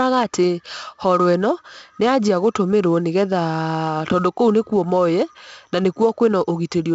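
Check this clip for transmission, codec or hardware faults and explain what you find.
The clip has one codec fault, present from start to finish. Across the whole speech clip there is a gritty hiss that rises and falls with the loudness of the voice, plus roughness on abrupt onsets, and the sound is dull, with nothing above about 7.8 kHz. This is heavy 4-bit ADPCM compression. Each sample is coded as a coarse 4-bit step from a predicted value, so the quantisation noise rides along with the signal level, and the adaptive step can't expand quickly enough for sudden attacks. The bandwidth limit and damage level fit a rate of about 64 kbps.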